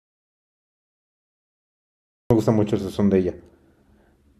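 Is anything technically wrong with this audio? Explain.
Yes. The clip opens with an audio dropout to silence already in progress. From the start until 2.31 s there is nothing at all, then the speech comes in mid-flow. The gap is silent with no room tone or hiss, which sets it apart from a natural pause or a noise gate that leaves a faint floor. The likely cause is a lost input, such as a disconnected device or a mute, while recording continued writing silence.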